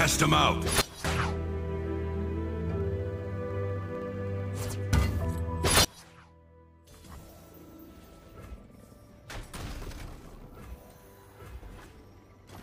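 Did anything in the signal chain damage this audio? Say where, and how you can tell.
Yes. There are two sudden gain jumps. The level drops by about 18 dB from 0.81 to 1.05 s, then by about 24 dB from 5.85 s to the end. Sound and noise floor fall together in a single step, so the likely cause is a digital gain change applied without a ramp.

Between 2.61 and 4.91 s there are periodic USB or driver dropouts, around forty small ticks spaced 64 ms apart. Each skips only a tiny sliver of audio, roughly a tenth of a millisecond, so it points to the driver or buffer stage being blocked on a fixed schedule.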